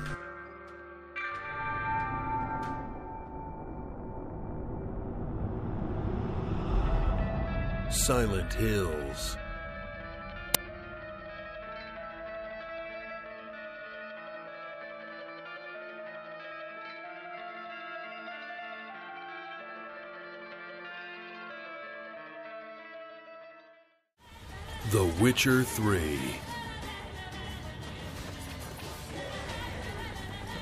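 At 10.55 s, a 5.8 ms loud crack cuts through. This is an uninitialised buffer. Leftover memory played as samples, which fits a 256-sample buffer.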